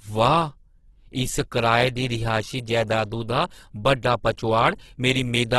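Opus compression runs through the whole speech clip. The sound is heavily rough and grainy, with a noisy texture and nothing above 12.4 kHz. The likely cause is the CELT music mode short of bits and filling bands with folded or noise content, which fits a rate around 12 kbps.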